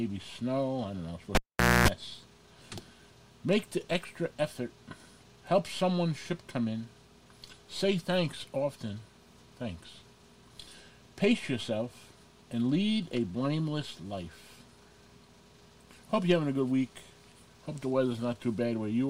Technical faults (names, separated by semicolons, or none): cable pulled and plugged in